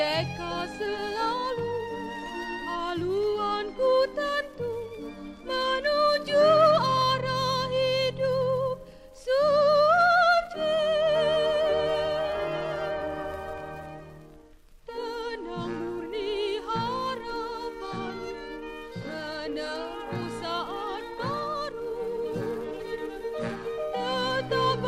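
Nothing is technically wrong with this clip.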